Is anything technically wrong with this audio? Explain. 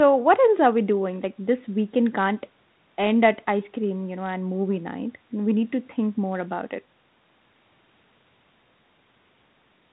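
No, nothing here is technically wrong.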